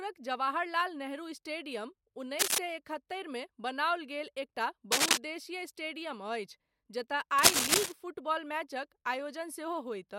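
A worn cable, plug or control being disturbed is the likely cause of the cable scratch noise here: its contact resistance jumps about erratically and injects irregular bursts into the speech. Just after "जवाहरलाल नेहरू स्टेडियम", from 2.39 to 2.58 s, a brief scratchy rustle sits a little above the speech. A louder one, roughly 10 dB above it, follows from 4.92 to 5.18 s. The longest, from 7.38 to 7.92 s at a similar level, ends right before "फुटबॉल मैचक".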